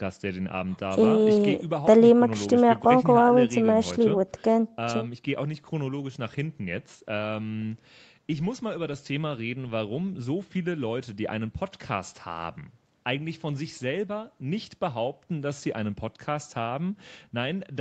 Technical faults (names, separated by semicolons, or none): none